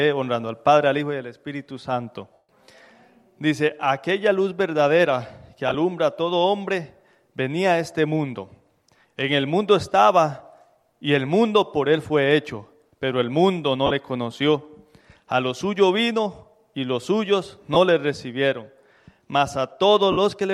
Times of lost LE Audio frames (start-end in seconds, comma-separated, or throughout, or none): 2.33-2.48, 5.68-5.75, 13.86-13.91, 17.74, 20.12-20.17